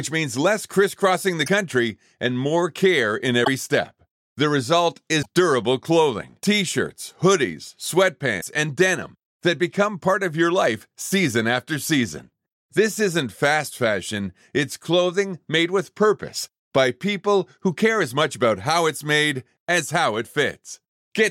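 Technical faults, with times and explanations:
1.45–1.48 s, 3.44–3.48 s, 5.21–5.26 s, 8.40–8.44 s: broken MP3 bit reservoir, likely. The sound skips ahead. Brief chirps or noise bursts span one or two 26 ms frames.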